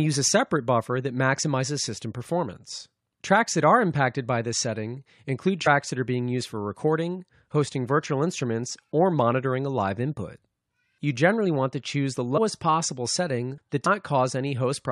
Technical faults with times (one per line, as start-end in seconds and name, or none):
5.65 compressed frames skipped
12.37 compressed frames skipped
13.85 compressed frames skipped